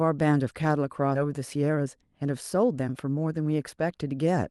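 At 1.15 to 1.17 s the speech makes a skip ahead: roughly 0.7 s of audio was discarded because later material was already waiting, and the two sides are spliced with no filler and no silence. It sounds like an abrupt jump mid-utterance, as if a chunk were cut out. On a waveform the envelope changes shape instantly at the join; on a spectrogram harmonics and formants break off and resume in a different pattern with no gap.

From 1.25 to 3.60 s comes a jitter buffer speed-up. The buffer had grown beyond its target, so the receiver repeatedly trimmed short pitch-period pieces, removing about 150 ms in total and running at 107% speed while the pitch holds. The speech sounds slightly hurried. A spectrogram shows the harmonic lines at unchanged heights but syllables packed closer, and the waveform shows tiny, seamless cuts at pitch-cycle boundaries. Throughout, the Opus call path at 32 kbps leaves energy ending near 12 kHz.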